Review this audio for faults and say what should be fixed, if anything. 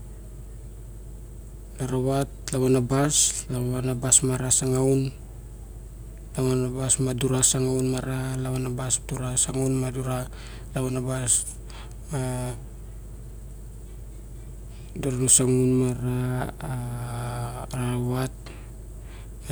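No faults turned up in this audio, so nothing needs to be fixed.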